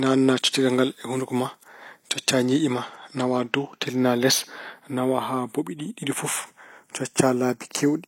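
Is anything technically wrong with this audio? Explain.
Yes. Channels drifting apart runs throughout the speech. The two channels came from devices on separate clocks that differ by around 20 parts per million, so their offset creeps to a fraction of a millisecond. Summed to mono, comb notches sweep slowly through the spectrum, heard as slow flanging.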